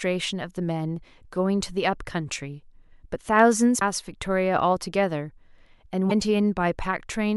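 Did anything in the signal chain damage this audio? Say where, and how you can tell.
Yes. The codec stage was fed damaged data in a compressed stream, heard in the speech as two short garbled blips, from 3.78 to 3.82 s and from 6.08 to 6.12 s, each about 40 ms long. Corrupted bytes made the decoder misread those frames and lose sync until it found a valid frame header. Unlike a converter click or a buffer dropout, which sound like a sharp tick or a clean gap, each of these is a brief glitch left by frames the decoder misread.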